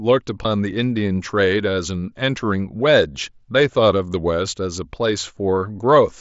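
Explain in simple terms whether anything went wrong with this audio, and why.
A few voice packets travelling from the Bluetooth headset to the phone went missing: concealed Bluetooth headset packet loss. Each time, the phone filled the gap by reusing a closely matching stretch of the speech it had just received. The gaps were tiny: about 15 ms at 0.43 s, and about 7.5 ms each at 4.13 s and 5.56 s. The single losses at 4.13 s and 5.56 s are nearly hidden, while the two-packet gap at 0.43 s comes out as a brief buzzy tone with a small warble as the real speech returns, passing through the headset's mSBC link.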